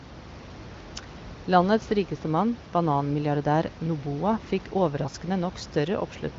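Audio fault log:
No faults found; room noise sits about 17 dB below the speech, and the absence of content above 7.5 kHz is expected from the AMR wideband (HD Voice) path.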